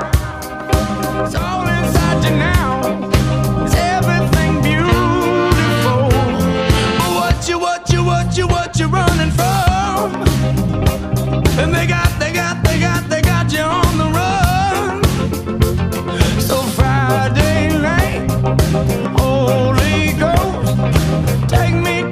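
No technical faults can be heard anywhere in this audio.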